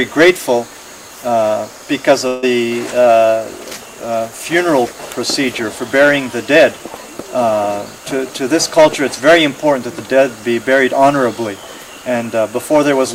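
At 2.27 s a burst of packet loss begins, lasting until 2.44 s. Several packets in a row never arrived in time. The receiver extends the last sound for about 150 ms, fading it down. Then audio resumes later, with roughly 160 ms missing.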